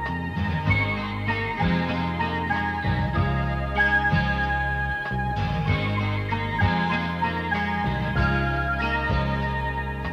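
Listening closely turned up nothing that stood out as a technical problem anywhere in the audio.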